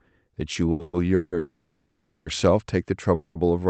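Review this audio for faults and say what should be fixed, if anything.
Repeated stalls (stutter) run from 0.53 to 1.34 s. The speech halts four times, and the longest hold lasts 170 ms. Each time, the jitter buffer runs dry and the receiver stretches the last sound until packets arrive. In total 390 ms is filled in this way, nearly half of that stretch, so the speech drags and stutters while nothing is lost. Prevent it by giving the adaptive jitter buffer more headroom and fixing the uneven packet delivery upstream.

A call audio freeze sits at 1.38 to 2.28 s. The last sound is held as a fading buzz for 880 ms, with about 70 ms of silence at its end. The speech then picks up exactly where it stopped, now 880 ms later. A shorter freeze at 3.14 to 3.37 s fills 210 ms with no silence and adds 210 ms of delay. The likely cause is packets held up in the network long enough to empty the buffer. 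Prevent it by finding and removing the transient network congestion or routing stall.

The Opus call path cuts the audio off above 8 kHz, as expected for this codec setting.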